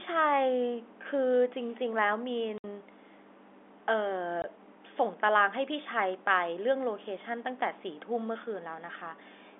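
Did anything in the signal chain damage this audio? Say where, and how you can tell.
Yes, at the network stage: packet loss filled with silence. The speech drops to dead silence from 2.58 to 2.64 s (60 ms) and from 4.42 to 4.44 s (20 ms), with hard edges. Both gaps are whole multiples of 20 ms, which fits three lost packets and then one, and the receiver inserted silence instead of concealing them. A loose cable or buffer underrun would not land on these packet-sized lengths. The narrow G.711 telephone band sounds intact throughout.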